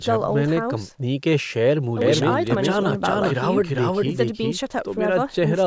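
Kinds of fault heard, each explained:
Doubled audio track: an equally loud copy of the speech trails roughly 400 ms behind, dry and abruptly switched on and off, likely from a second capture path.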